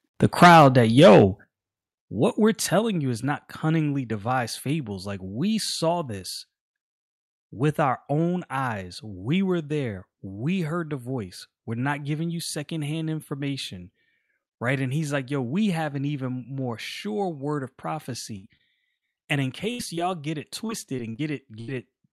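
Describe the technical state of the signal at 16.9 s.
At 16.9 s the speech signal is intact, with no audible fault at that moment.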